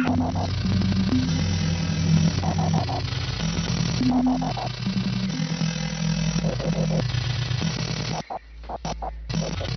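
No technical faults can be heard anywhere in this audio.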